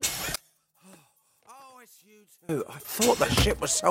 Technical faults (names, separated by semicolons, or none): one channel inverted